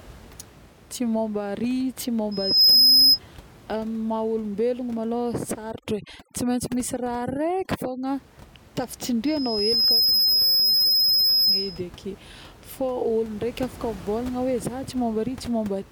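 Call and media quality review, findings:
Overdone noise removal, 5.71–8.07 s. Background drops and breaks up into twinkling specks. Probable component: noise suppressor set too aggressively. Bands near its noise estimate are cut hard, taking quiet speech detail with them. Spectrogram: patchy holes between harmonics, isolated bright dots in gaps, floor sharply darker than surrounding audio. Room noise sits about 23 dB below speech outside this span, unsmeared.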